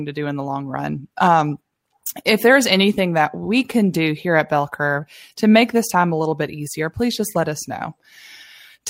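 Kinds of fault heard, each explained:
No kinds of fault are heard in this speech clip.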